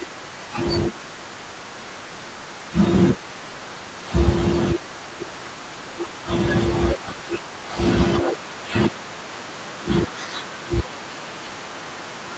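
From 0.85 to 2.72 s, 3.13 to 4.05 s, 4.74 to 6.24 s and 10.46 s to the end, a faint second copy of the speech trails the original by 293 ms at about 25 dB lower. This is an echo leak, likely from a far-end loudspeaker whose echo canceller let leftover sound back into the call. On a spectrogram, each syllable's harmonics reappear as a weak ghost shifted right, below the 8 kHz ceiling. The waveform shows small tails after word endings.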